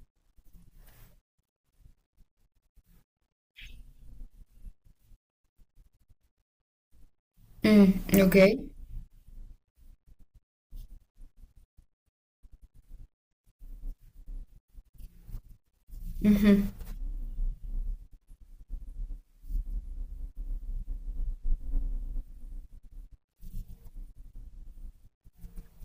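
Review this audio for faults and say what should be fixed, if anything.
Hard clipping affects the speech from 7.65 to 8.47 s. The signal overdrives a stage by about 6 dB, so its peaks are sliced flat. Those flat tops add high harmonics, heard as crackle on the peaks of loud syllables. Reduce gain before that stage to leave headroom.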